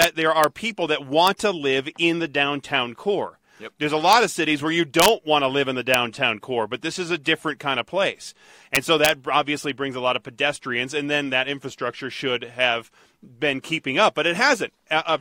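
Violent, sharp cracks tear through the loud moments of this speech at 0.02–0.04 s, 0.44 s, 1.27 s (between "people that" and "to live in the"), 4.13 s (just before "of cities where you"), 5.00–5.08 s, 5.94 s and 8.75–9.09 s (after "different kind of place", before "obviously brings a lot"). This is integer overflow. Peaks pushed only about 0 to 1 dB past the maximum wrap to the opposite sign instead of being limited, so each one flips across the full range.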